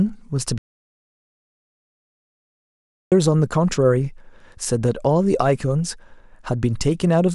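An audio dropout to silence runs from 0.58 to 3.12 s. The speech cuts off mid-flow and returns abruptly, leaving 2.54 s of silence with no room tone. The input was likely lost while recording continued writing silence, so that speech is gone.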